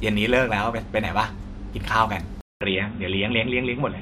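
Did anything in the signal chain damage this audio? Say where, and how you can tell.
Yes. At 2.41 s the speech cuts out for 200 ms, then returns dull and boxy to the end, with nothing above 3.8 kHz, new faint background noise and a similar level. Likely an input switched to a poorer device at the driver stage.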